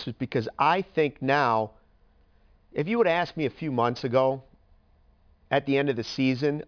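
Aliasing runs throughout this speech clip, from start to finish. The audio appears to have been brought down to a much lower sample rate without a low-pass filter first, so energy above the new half-rate limit folds back at 5.5 kHz into false, unrelated frequencies. Sibilants come out gritty and metallic, the spectrum stays dense right up to that edge, and the folded content sits at roughly 25 dB below the speech, which fits a drop to around 11 kHz.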